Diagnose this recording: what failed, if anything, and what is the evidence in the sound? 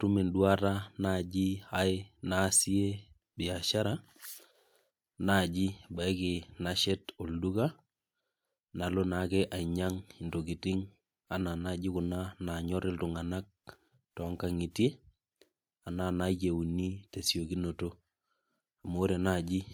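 Nothing stood out on listening to this speech recording; no stage of the chain gave itself away with any audible problem.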